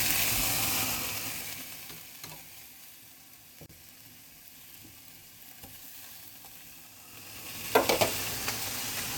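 At 3.66 s the sound drops out for about 34 ms, ending at 3.69 s. This is a gap at a join of encoded pieces. The audio was encoded in separate pieces and joined without trimming. The silent start-up delay and the padded last frame of each encoder run stayed in. The result is a brief hole in continuous sound. Its edges are smeared by the codec. Afterwards the sound resumes exactly where it stopped.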